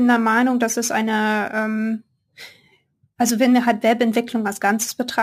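Throughout, crude rate conversion repeats samples unfiltered, fitting a 44.1 kHz to 48 kHz change. The errors form an inharmonic fizz roughly 25 dB down.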